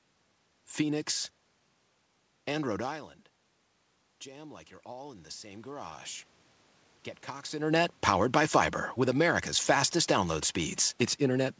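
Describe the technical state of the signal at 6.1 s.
At 6.1 s you're at the very end of an automatic gain rise running from 4.24 to 6.11 s. After the talker moved off around 3 s and the input dropped about 16 dB, the gain crept up about 6 dB, so voice and room noise swell together and only part of the level comes back.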